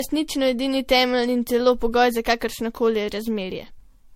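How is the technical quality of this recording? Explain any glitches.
The recording's quality is poor throughout. Generation loss affects the whole clip. Speech sounds swirly, hollow and smeared, with blurred attacks and nothing above 16.4 kHz. It likely comes from about seven MP3 re-encodes near 65 kbit/s, each adding fresh quantisation noise.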